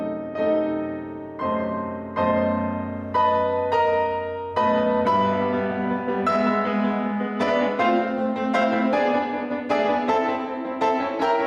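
Gain pumping runs through the whole piece of music. The level ducks about 5 dB under loud sounds, likely from gain set far too high into a fast limiter. The waveform looks flattened, and a spectrogram shows the level pulsing with each peak.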